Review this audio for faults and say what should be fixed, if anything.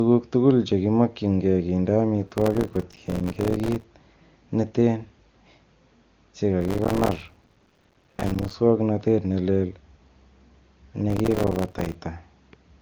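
Processor overload crackle occurs at 2.27–3.84 s (just after "tuguk chekimokyinge kinde"), 6.61–8.54 s and 11.10–11.95 s. In each burst, a long run of buffers a few milliseconds long misses its deadline. Every miss becomes a hard-edged silent gap, which tears the speech into grit. To prevent it, lower the processing load or use a larger audio buffer.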